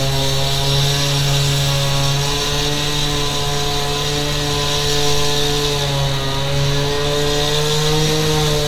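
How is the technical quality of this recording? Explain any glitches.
No glitches or faults are audible.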